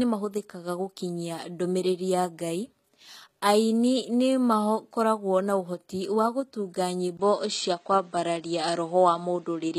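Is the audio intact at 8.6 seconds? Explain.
No. An input switched to a poorer device from 7.17 s to the end: after a 20 ms gap, the sound turns duller, with nothing above 8.6 kHz, a level shift of around 5 dB and faint new background noise, likely from a change to a narrower-band microphone. HE-AAC compression also runs throughout, with nothing above 14.9 kHz and plainly audible damage. The treble is likely rebuilt from copied lower bands, which fits roughly 20 kbps.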